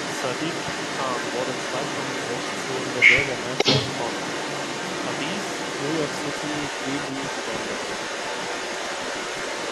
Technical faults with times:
0.00-9.71 echo leak

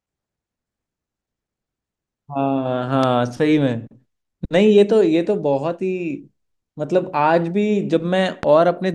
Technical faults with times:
3.03-3.06 loud pop
8.43-8.45 loud pop

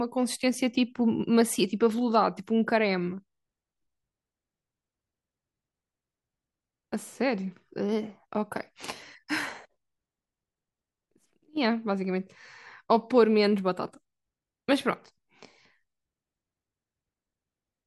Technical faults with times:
none

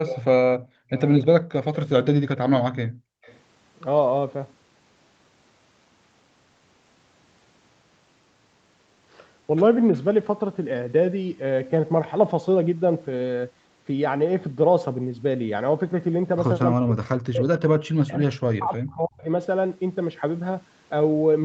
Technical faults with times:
0.58-0.90 background gated by the echo canceller
0.93-1.87 echo leak
2.88-3.22 background gated by the echo canceller
3.22-3.40 echo leak
16.79-19.27 speech suppressed in double talk

